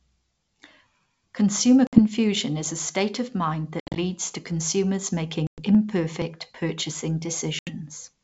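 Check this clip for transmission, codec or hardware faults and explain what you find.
Packet loss on an ADPCM call occurs four times, at 1.87–1.99 s, 3.80–3.99 s, 5.47–5.63 s and 7.59–7.74 s. The speech drops to silence with hard edges, for about 60, 130, 110 and 80 ms of missing audio; the second event is broken into scattered gaps, the longest 70 ms. Each time, the receiving decoder's predictor and step size lose track of the sender's, so the speech comes back slightly distorted, then settles within tens of milliseconds. The wideband G.722 coding underneath shows little or no damage of its own.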